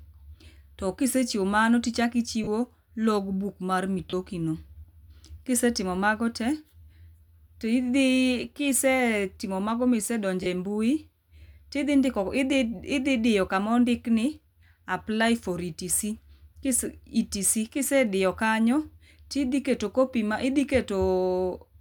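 Lost LE Audio frames at 2.44 s, 4.10 s and 10.43 s: each dropout lasts about 30 ms, which fits three 10 ms frames going missing. The LC3 decoder covers each gap by replaying the last spectrum with randomised signs, so the speech briefly smears into noise.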